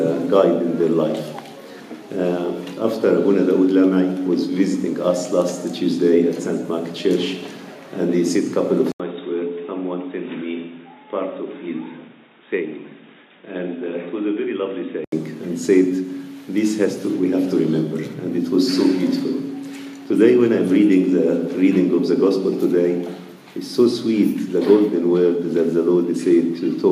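At 8.92 s, 80 ms of silence. Then the sound turns dull and narrower, much quieter and hissier. Likely an input switched to a poorer device, until 15.12 s.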